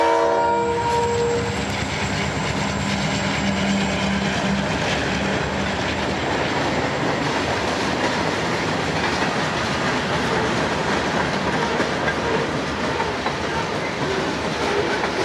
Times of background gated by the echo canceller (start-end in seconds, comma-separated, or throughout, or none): none